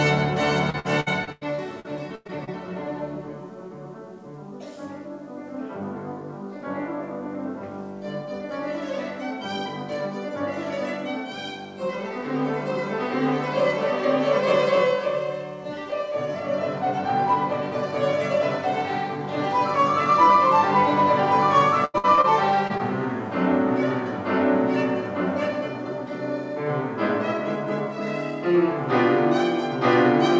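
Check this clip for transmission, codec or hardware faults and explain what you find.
Two kinds of transmission fault are present, both from packets failing to reach the decoder in time, heard through a call path that matches G.722 at about 64 kbps, with nothing above 8 kHz.

Repeated packet loss (robotic sound) occurs from 0.70 to 2.49 s and again from 21.85 to 22.26 s. In the first stretch packets went missing ten times, the longest hole 98 ms, so about 27% of that span is reconstructed. The second stretch has four holes, the longest 86 ms, with about 45% concealed. Each time the receiver extends the last sound to bridge the hole, and another loss arrives soon after. The result is choppy, with pieces of sound missing.

Short concealed packet loss occurs twice just after the second stretch, at 22.68 to 22.72 s and 22.78 to 22.81 s, each losing about 20 ms. These are isolated drops rather than a run. 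The decoder fills each hole by carrying the preceding sound forward, continuing its pitch if there was one or using shaped noise otherwise, then crossfades back into the real signal. Each is heard as a brief smear or wobble.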